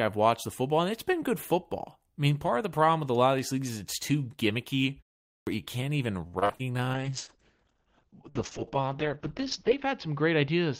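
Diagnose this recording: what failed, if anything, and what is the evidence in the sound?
The playback device went idle during the 0.49 s pause after "is it's too gimmicky" and was slow to resume. The first 40 ms at 5.43 s were swallowed, so "you can't even" starts abruptly, without its opening sound. This is a clipped start after a pause.

The network suffered repeated packet loss (robotic sound) from 6.27 to 6.61 s, just after "you can't even." Five gaps, the longest 58 ms, were patched by extending the preceding sound. Over half that stretch is concealment, so it comes out choppy, with pieces missing.

In call processing, a call bitrate drop told the Opus encoder to fall from 32 to 8 kbps at 6.95 s. The audio stays degraded to the end of the clip. Bandwidth narrows from 20 kHz to 8 kHz, leaving the sound muffled, coarse and watery.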